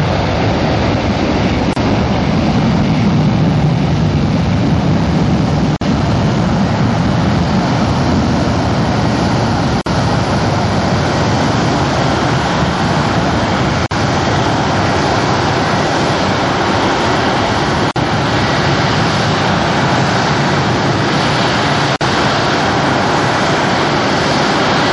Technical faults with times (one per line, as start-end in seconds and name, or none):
0.00-24.93 MP3 compression
1.73-1.76 gap at a join of encoded pieces
5.76-5.81 gap at a join of encoded pieces
9.81-9.86 gap at a join of encoded pieces
13.86-13.91 gap at a join of encoded pieces
17.91-17.96 gap at a join of encoded pieces
21.96-22.01 gap at a join of encoded pieces